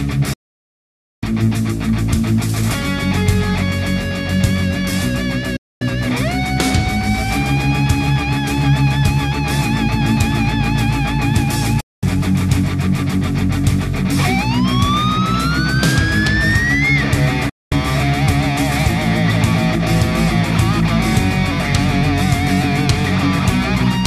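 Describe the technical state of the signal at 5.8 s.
At 5.8 s you're right at the tail end of a digital broadcast dropout that runs from about 5.56 to 5.82 s. The receiver stopped getting usable frames, either losing the signal or hitting failed checksums, so it muted itself: the sound fades out in about 8 ms and stays silent for roughly a quarter second (240 ms, which fits around ten lost frames) before picking up again. Whatever aired in that gap is simply gone.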